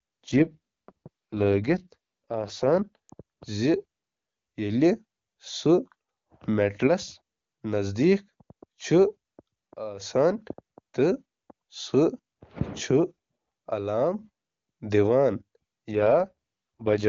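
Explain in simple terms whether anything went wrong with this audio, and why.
From 0.31 to 3.10 s and 15.92 to 17.07 s, the speech turns rough and synthetic. This is an AMR rate drop, which trades sound detail for error protection on a weak phone link.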